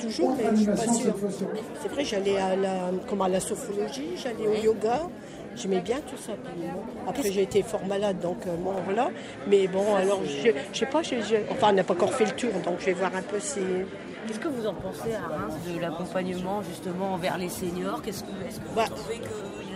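From 8.78 s to 14.45 s the sound turns duller, with nothing above 11.4 kHz, and then clears again. The likely cause is an input switched to a poorer device. There is no gap at either switch and little change in level, but a faint new background noise arrives with the dull stretch, well below the sound. That noise and the abrupt return set it apart from a simple low-pass filter or EQ change.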